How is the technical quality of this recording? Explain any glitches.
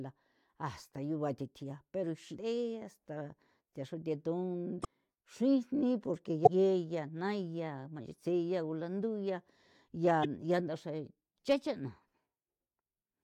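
The recording's technical quality is marred by four brief bursts of damaged data in a compressed stream, at 2.32 to 2.36 s, 4.81 to 4.85 s, 6.45 to 6.47 s and 10.21 to 10.25 s. Each lasts roughly 30 to 40 ms. Corrupted bytes make the decoder misread frames and resynchronise, producing a chirp, squawk, click or short hole. On a spectrogram each appears as a narrow broadband smear; on the waveform, an abrupt jagged block.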